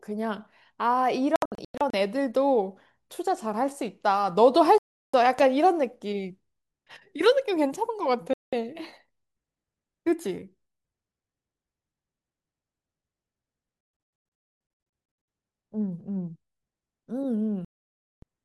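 Digital broadcast dropout, 1.36 to 1.94 s: the receiver stops getting usable frames and mutes, so the speech breaks into several short silent holes, the longest about 96 ms, totalling 320 ms lost. Digital broadcast dropout, 4.78 to 5.14 s: a single muted gap of 352 ms. Loud pop at 5.39 s: one sharp click roughly 10 dB above the speech, which continues underneath, likely from a sudden voltage step such as static or a switching transient. Digital broadcast dropout, 8.34 to 8.53 s: a 192 ms silence. Digital broadcast dropout, 13.81 to 15.28 s: repeated holes totalling 960 ms, the longest 256 ms. Digital broadcast dropout, 17.65 to 18.23 s: a 576 ms gap. The losses come in whole 32 ms steps, which fits the decoder muting one failed frame at a time, and the speech sent during each gap is gone.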